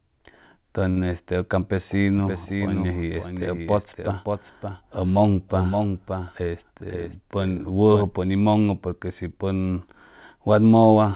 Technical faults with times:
0.90-0.99 short stall from a late packet
2.18-8.02 doubled audio track
6.40-7.06 jitter buffer speed-up

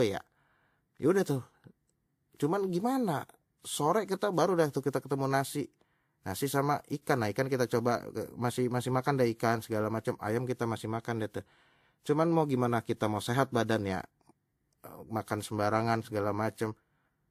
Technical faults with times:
0.00-17.30 transcoding between lossy codecs

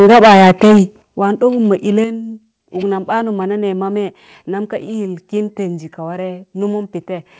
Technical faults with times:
0.00-0.81 microphone overload
1.02 microphone volume stepped down
2.04 microphone volume stepped down

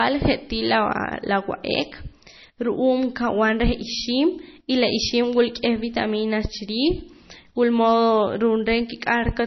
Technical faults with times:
0.00-9.46 MP3 compression

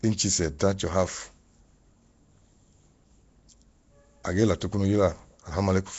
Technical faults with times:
0.00-5.99 Nellymoser compression

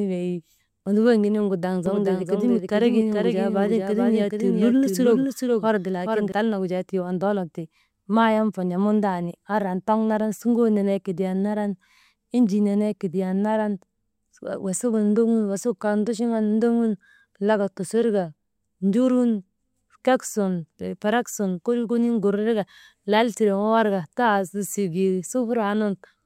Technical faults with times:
1.86-6.32 doubled audio track

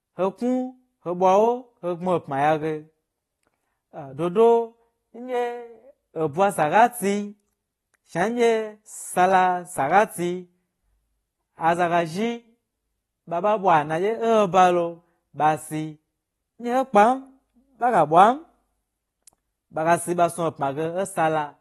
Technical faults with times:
0.00-21.60 AAC compression

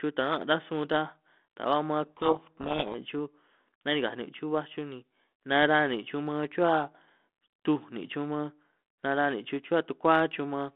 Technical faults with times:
2.05-2.95 codec payload misread

